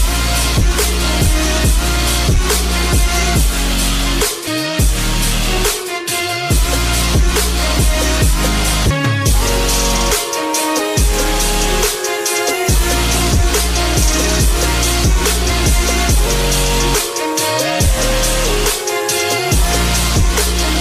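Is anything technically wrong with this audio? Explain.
Yes, there's damaged data in the compressed stream, showing up as three very short glitches at about 4.46, 8.90 and 15.49 seconds. Each is a quick chirp or blip, under 20 ms. What's happening is that a few bytes of the encoded file are wrong, so the decoder can't make sense of that frame, loses sync, and hunts for the next valid frame header before the sound carries on.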